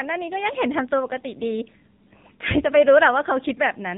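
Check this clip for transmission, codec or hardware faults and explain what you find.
One codec fault runs through the whole speech clip. AMR narrowband mobile codec: nothing passes above about 3.8 kHz, and the voice is rebuilt from a vocal-tract model fed sparse pulses. The plainly buzzy, synthetic texture fits a low mode near 7.4 kbps. That texture, not just missing highs, sets it apart from simple telephone band-limiting.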